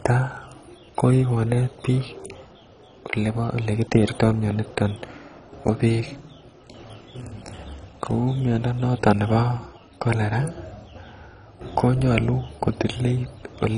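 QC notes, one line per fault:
Throughout, MP2 compression: the speech is dull, with nothing above 10.4 kHz, and upper sub-bands flicker with a gurgling, granular roughness, likely from heavy Layer II coding at a rate that fits about 32 kbps. Unlike a plain low-pass filter, the remaining bands sound coarsely quantised and unstable.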